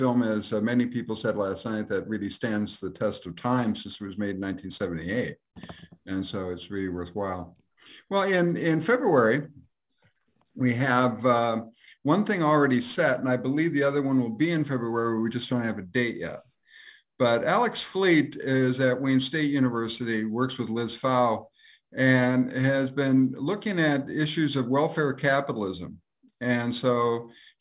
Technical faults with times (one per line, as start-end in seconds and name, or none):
none